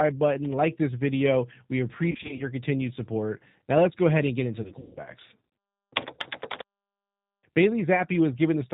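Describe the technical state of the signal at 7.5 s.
At 7.5 s the speech carries G.729 codec damage across the whole clip: an 8 kbit/s model rebuilds it from a vocal tract filter and pulse excitation, so it sounds rough and synthetic, and a spectrogram shows nothing above 4 kHz.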